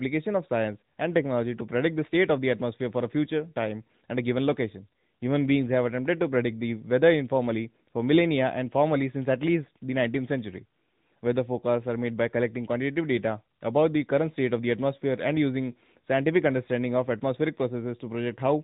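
From start to finish the speech sounds thin, boxy and buzzy, with nothing above about 3.8 kHz. That is the AMR narrowband mobile codec at work: a vocal-tract model rebuilding each 5 ms from a few pulses, with plainly audible damage that suggests a mid rate around 10.2 kbps.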